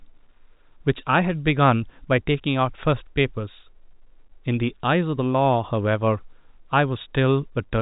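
No technical faults can be heard anywhere in this speech.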